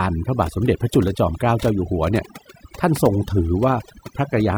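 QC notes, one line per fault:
Throughout: overdone noise removal. The noise reduction was set far too aggressive, so frequency bands sitting near its noise estimate are pulled down or gated off, taking the quieter parts of the speech with them. The background drops and breaks up into twinkling specks.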